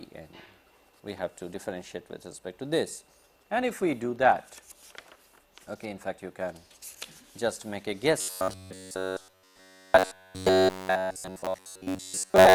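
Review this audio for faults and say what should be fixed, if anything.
From 8.21 s to the end of the clip, the sound collapses into robotic sound from repeated short buffers: a rigid, metallic buzz at 93.8 Hz that only loosely tracks the underlying audio. That pitch fits a segment of about 10.7 ms being replayed over and over, so the likely cause is audio arriving too seldom and the last buffer being repeated while fresh material is skipped. Unlike codec warble or comb filtering, the buzz holds one fixed pitch regardless of the content. Enlarging the playback buffer and fixing the upstream delivery rate would prevent the repeats.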